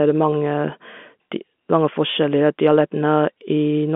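No technical faults can be heard in the speech, which has the ordinary narrow band of a G.711 telephone line, running from 200 Hz to 3.5 kHz.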